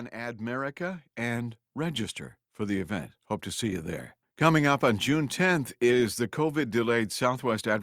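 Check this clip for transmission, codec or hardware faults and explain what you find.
One fault stands out: automatic gain rising, running from about 0.11 s to 4.14 s. Across those four seconds the level climbs steadily by about 11 dB. The automatic gain control judged the incoming signal too quiet and responded by stepping its gain up gradually rather than at once. Because the whole input is amplified, the speech and the background noise swell together, producing a slow upward ramp in loudness instead of a sudden jump.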